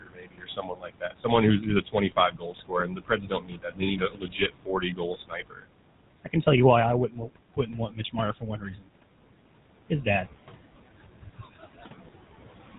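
Speech, heard throughout with the artifacts of a noise suppressor that is pulling the background down by about 21 dB. Between phrases the room noise, which sits only about 13 dB under the voice, sinks away, then swells back beneath each stretch of speech, as individual bands are turned down and back up frame by frame. That pumping tied to speech activity is what separates it from a steady gate or plain hiss. The whole clip also carries the coarse, gravelly buzz of the GSM full-rate codec. Its pulse-driven excitation model gives the voice a rasp that stays constant regardless of background level, so it cannot be mistaken for suppressor warble, and the band stops near 4 kHz, which fits the 13 kbps full-rate coder rather than a simple low-pass filter. On top of this, the suppressor cuts real speech in three places. From 0.0 to 1.26 s, roughly a second of the voice is pushed down by as much as about 22 dB. 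From 1.6 to 5.67 s, about three seconds in total drop by up to about 21 dB. From 10.99 to 11.86 s, around half a second falls by up to about 20 dB. In each case the affected speech sounds swallowed or faint, and this differs from a network dropout because the sound fades with the background rather than stopping abruptly.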